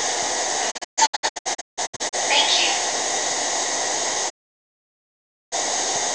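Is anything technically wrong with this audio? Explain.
Yes. The audio has two digital broadcast dropouts. From 0.70 to 2.15 s the sound breaks into several short holes, each cut with a quick 20 ms fade and the longest lasting 160 ms, totalling about 0.77 s missing across 1.4 s. From 4.28 to 5.54 s it mutes for about 1.2 s. The receiver stopped getting valid frames, likely from signal loss or checksum failures, and muted until good frames returned. The sound sent during those gaps is gone.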